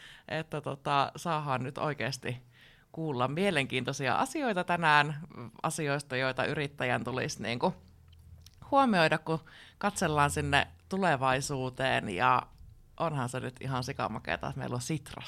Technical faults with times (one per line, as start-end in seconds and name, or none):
none